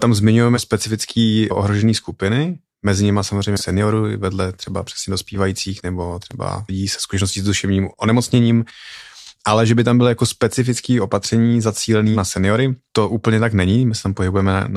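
Speech, with one corrupt frame concealed fault at 3.58 to 3.62 s, covering about 38 ms. The decoder caught bit errors in a short run of AAC frames and covered them.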